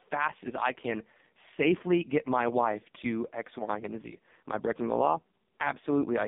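Speech passed through an AMR narrowband mobile codec for its whole length, with heavy codec damage. The band is held to roughly 200 Hz to 3.7 kHz, with nothing above 3.7 kHz, so sibilants and upper harmonics are gone. The voice comes out buzzy and synthetic because AMR-NB rebuilds it from a vocal-tract model excited by only a few pulses per 5 ms subframe. That degree of coarseness fits the lowest mode, around 4.75 kbps.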